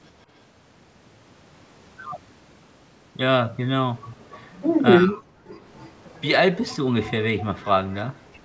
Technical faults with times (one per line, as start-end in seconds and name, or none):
4.98-5.29 speech suppressed in double talk
5.47-6.18 echo leak